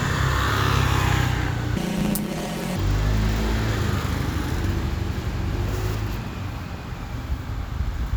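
From 1.77 to 2.77 s there's a planar audio read as interleaved fault: the short, roughly 10.7 ms blocks, which fit a 512-sample block size, turn the sound into a robotic buzz at about 94 Hz.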